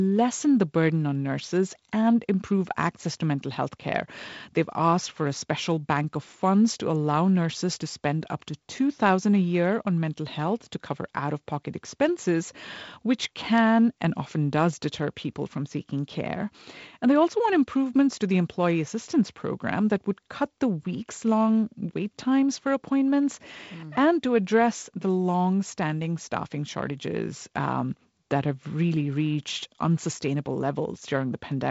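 Nothing here counts as a fault: the speech reaches us over a G.722 wideband telephone link, which fits 48 kbit/s, with the top end simply stopping around 7.7 kHz the way that coding does.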